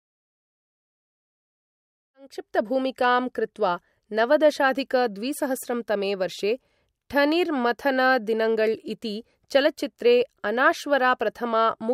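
Listening to this speech recording, nothing stood out as a technical problem, and the smooth fade-in that starts at around 2 s and reaches full level by 2.71 s sounds like an ordinary editorial fade.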